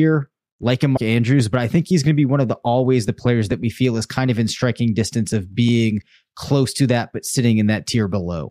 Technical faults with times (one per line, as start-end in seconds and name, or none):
0.96-0.98 compressed frames skipped